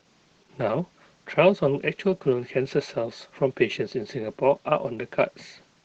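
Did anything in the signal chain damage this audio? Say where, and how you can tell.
Yes. The damage is at the codec stage, and it runs through the whole speech clip. This is Opus voice compression in its SILK linear-prediction mode. Nothing is heard above 8 kHz, so the band is wideband. The voice sounds muffled, hoarse and faintly robotic. The coarse excitation coding that causes this is plainly audible, which points to a low bitrate near 12 kbps. The encoder keeps the vocal envelope but spends too few bits on fine detail.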